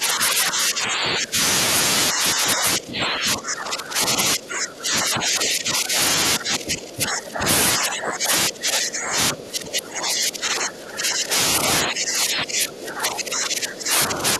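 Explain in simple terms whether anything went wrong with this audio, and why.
Speech suppressed in double talk runs through nearly the whole clip, in stretches from 0 to 1.4 s, 2.1 to 4.2 s, 4.4 to 6.0 s, 6.4 to 7.5 s, 7.8 to 8.3 s, 8.5 to 11.3 s, and 11.8 s to the end. In each, the voice keeps sinking in loudness or breaking up. The likely cause is an echo canceller that heard both people talking at once, could not tell this talker apart from the other side's voice coming back through the loudspeaker, and turned everything down together.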